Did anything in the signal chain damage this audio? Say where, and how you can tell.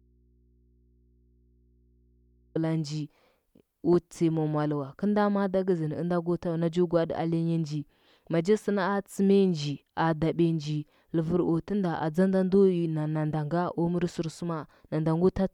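Yes. An audio dropout to a faint residue is already under way when the clip begins and lasts until 2.55 s, where the speech cuts in abruptly rather than fading up. Throughout that stretch only mains hum remains, roughly 35 dB below the speech level, which shows the path after the break stayed live while the source was disconnected. The likely cause is in the analogue wiring: an intermittent cable or connector leaving an open input that picks up hum.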